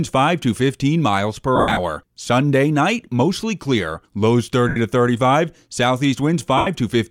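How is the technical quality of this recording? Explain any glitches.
The recording is marred by three short bursts of lost LE Audio frames. From 1.56 to 1.79 s (180 ms missing, longest run around 70 ms), at 4.68 to 4.77 s just after "night mostly clear lows", and at 6.57 to 6.67 s, the LC3 decoder repeats the last spectrum with scrambled signs. That turns the sound into a brief noisy smear rather than clean silence, which separates it from a plain dropout.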